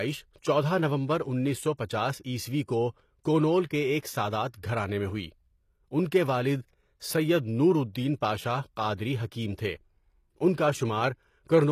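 Throughout the speech, the treble sounds synthetic: sibilants come out gritty and metallic, and nothing reaches above 14.9 kHz. This is likely HE-AAC compression, with the upper band rebuilt from copied lower bands at a data rate that points to roughly 24 kbps.

At 1.77 s, a pre-echo puts a brief hiss, about 16 ms long, just ahead of a sharp attack. The codec spread quantisation noise across the whole transform block, so the quiet moment before the onset carries noise meant for the louder part.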